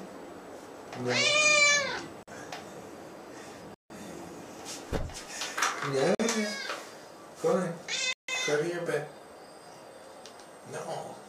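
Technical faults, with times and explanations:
2.23–2.28 s and 6.15–6.19 s, block of digital silence: the audio drops out for about 46 ms, which fits a 2048-sample buffer that wasn't filled in time. The hard edges on both sides leave a short hole.
3.74–3.90 s and 8.13–8.28 s, block of digital silence: longer dropouts of about 157 ms, cut in and out with no fade. You hear a gap in the sound.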